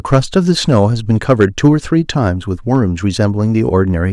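Speech with hard clipping from 0.13 to 1.68 s, overdriven by about 4 dB and flattening peaks, plus a brief overload of about 1 dB at 2.75 s.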